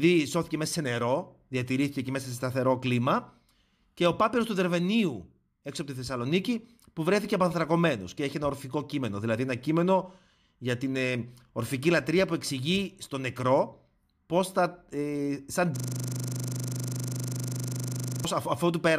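Speech with a system hang loop from 15.76 to 18.25 s, after "πώς θα ε σαν": a frozen computer or driver replays one 40 ms buffer, repeating it 62 times at 25 Hz.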